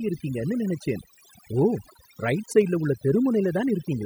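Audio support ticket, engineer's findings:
Overdone noise removal, whole clip. Denoiser set too strong. Bands near the noise estimate are gated out. Background dropped, breaking up into twinkling specks.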